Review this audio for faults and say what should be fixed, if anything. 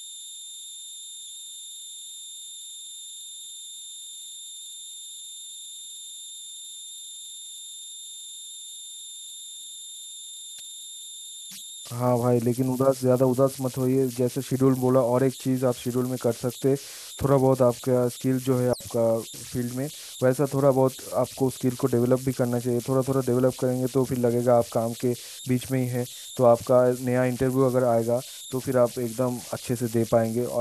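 Converter idle tones run through the whole speech recording as a pitched tone around 4 kHz, about 17 dB below the signal. An undithered delta-sigma converter falls into repeating bit patterns on small inputs, and those patterns produce the tone. Unlike broadband hiss, it is a distinct pitch rather than a spread of noise. Prevent it by enabling or adding dither at the converter.

A digital wireless dropout at 18.73 to 18.81 s leaves a clean 74 ms hole of near silence where the receiver muted after losing too much data. Unlike an analog wireless dropout, no burst of noise comes before or after the gap. Prevent it by improving the radio path with better antenna placement, shorter range or diversity reception.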